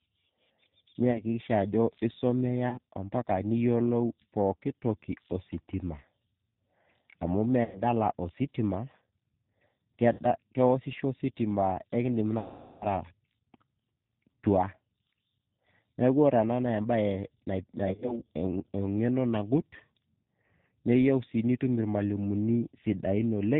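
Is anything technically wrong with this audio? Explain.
Yes. The whole clip has passed through the G.729 codec, and it has dropouts covered by packet loss concealment.

Throughout, the speech was squeezed into what sounds like G.729 at 8 kbit/s. The encoder keeps only a vocal tract filter, a pitch predictor and a handful of pulses per frame, and discards everything above 4 kHz. The damage is plainly audible: the speech is muffled and band-limited, with a rough, synthetic edge where natural detail has been replaced by coarse pulse patterns.

VoIP packet loss concealed by the speech codec occurs six times. At 1.11 to 1.24 s, about 40 ms goes missing in short gaps spread over 80 ms. At 2.69 to 2.78 s, 30 ms is lost. At 7.64 to 7.82 s, 110 ms is lost, and at 10.13 to 10.21 s, 50 ms. The worst is 12.39 to 12.87 s, with 420 ms lost. At 17.84 to 18.21 s, 100 ms is lost in short gaps across 180 ms. 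Each time, packets failed to arrive. The decoder filled each hole by repeating its last pitch and filter settings at falling gain. This smears the speech into a buzzy, fading tone, which is longest and most obvious in the 420 ms gap. Because each frame builds on the previous one, the speech stays weak or distorted briefly after audio resumes.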